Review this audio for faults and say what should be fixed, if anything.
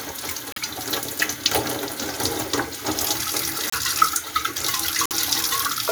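Three brief garbled bursts, at 0.51 to 0.58 s, 3.67 to 3.74 s and 5.06 to 5.13 s, each about 70 ms, are likely a broken MP3 bit reservoir. After frames went missing, the next two or three 26.1 ms frames decoded with borrowed bytes taken from the wrong frame. Each burst shows on a spectrogram as a narrow vertical smear or gap, and the waveform jumps abruptly at its edges. To prevent it, cut MP3 files only with tools that preserve the bit reservoir, or re-encode from the original source.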